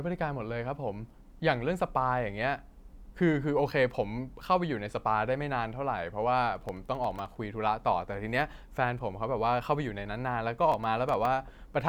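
Speech, with processor overload crackle in two bursts, 6.56 to 7.36 s and 10.72 to 11.25 s. The machine keeps missing deadlines on tiny buffers, probably under a millisecond each, leaving hard-edged gaps of silence that add up to gritty tearing, more of it in the first burst.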